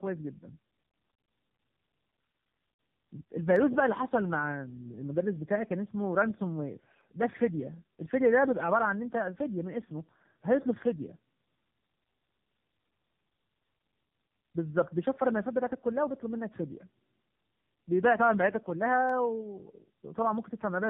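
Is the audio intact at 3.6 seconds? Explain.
No. At 3.56 s the stream likely lost a handful of samples, a small fraction of a millisecond, so the waveform jumps straight from one value to a later one. That is dropped samples: far too brief to take away any sound, but the sudden step is heard as a single sharp click and shows as a thin vertical line running through the spectrum at that instant.

The same moment also carries tandem speech coding, present across the whole clip. The speech was compressed by a low-rate mobile speech codec, decoded, passed over a telephone link, then compressed again by a second such codec. The roughness fits two AMR-NB stages in a row. Each coder works on the previous one's errors, so the speech sounds rough, muffled and warbly.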